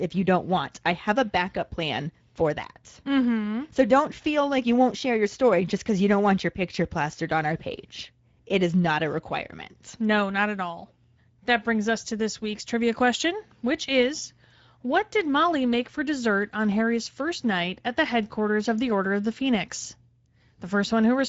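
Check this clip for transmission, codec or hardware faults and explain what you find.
One codec fault runs through the whole speech clip. Throughout, Speex codec damage: CELP coding with scarce excitation bits makes the speech hoarse and noisy, which fits a middle setting near 17 kbps. Nothing is present above 7.7 kHz.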